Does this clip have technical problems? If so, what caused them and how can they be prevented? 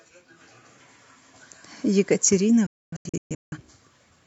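Yes. There's a digital broadcast dropout from 2.66 to 3.58 s. The receiver stopped getting clean frames, so instead of playing garbage it muted, with a very fast fade of about 3 ms, and came back once good frames returned. It isn't one clean gap but a cluster of holes spread over roughly 0.85 s, totalling about 0.68 s of missing speech, with the longest single hole 0.26 s. That pattern fits roughly 16 lost frames. Better reception, through antenna placement, signal strength or stronger error protection on the transmission, would prevent it.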